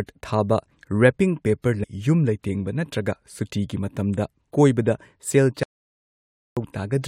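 A stream segment skipped at 1.82 to 1.85 s: the speech jumps abruptly forward with a brief blip just before "ꯌꯨꯝ ꯂꯩꯇꯦꯡꯕ ꯅꯠꯇ꯭ꯔꯒ". The likely cause is a chunk of the segmented stream failing to load, with the player moving straight on to the next chunk, so some of the talk is missing.

An audio dropout to silence follows from 5.63 to 6.57 s, lasting about 0.93 s. The sound cuts out mid-flow into silence with no room tone, then resumes. This likely comes from the input being lost while silence kept being written, and whatever was spoken in that stretch is gone.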